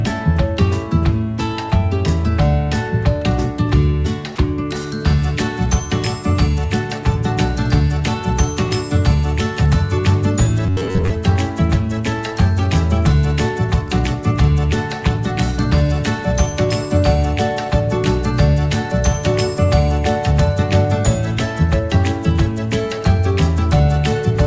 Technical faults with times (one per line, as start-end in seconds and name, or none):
4.36 sound dropped by the voice detector
10.66-11.11 robotic sound from repeated short buffers